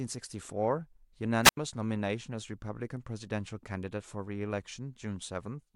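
From 1.43 to 1.57 s, a wireless microphone squelch dropout: hiss rises as the radio link fades, then an 83 ms mute leaves a flat, blank gap.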